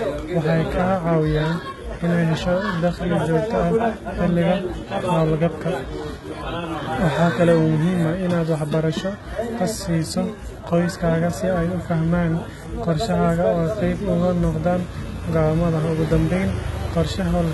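HE-AAC compression throughout: the treble is likely rebuilt from copied lower bands, so s sounds turn gritty and lispy, stopping at 11.8 kHz, which fits about 16 kbps.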